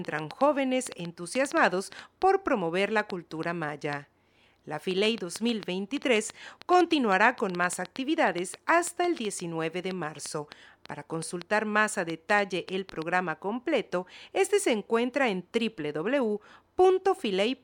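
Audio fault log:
0.05–13.03 s, train of clicks: a steady scatter of near-identical ticks, around seventy in all at about 4.7 per second with uneven spacing, poking roughly 10 dB above the speech and audible in the pauses too. It's likely interference or a faulty connection injecting pulses.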